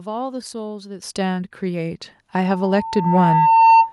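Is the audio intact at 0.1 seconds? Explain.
Yes, the speech at 0.1 seconds is intact, with no audible fault at that moment.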